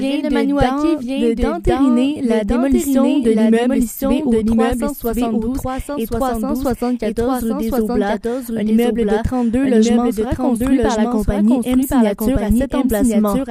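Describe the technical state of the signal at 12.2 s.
At 12.2 s the signal carries a doubled audio track, present across the whole clip: a second full-band copy trails about a second behind at roughly equal loudness, likely from an out-of-step duplicate path. Waveform and spectrogram show every event repeated one second later, with no decay.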